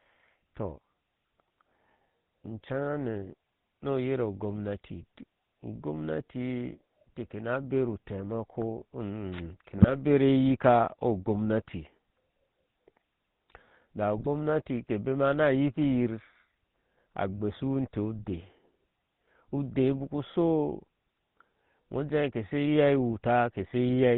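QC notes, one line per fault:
Throughout: GSM full-rate codec. The speech has the plainly audible buzzy, gravelly roughness of the original GSM coder, which fits a bitrate of about 13 kbps. The decoder rebuilds the voice by passing a regular pulse train through a vocal-tract filter, with most of the excitation detail thrown away, so the natural breathiness is replaced by a mechanical rasp. Nothing above 4 kHz comes through, leaving sibilants dull and the top end closed off.
9.78 to 9.94 s: GSM bit errors. A short burst of squawking, gargled distortion lasting about 0.16 s, spread over several consecutive frames. Corrupted filter, pitch and gain parameters reach the decoder, so the spectral shape bends and the level jumps from frame to frame, giving the broken, chattering quality instead of clean speech.
14.17 to 14.27 s: GSM bit errors. A second, shorter burst of about 0.1 s between "da u" and "ke bema na", with the same pops and gargling. 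The error rate here is slightly higher.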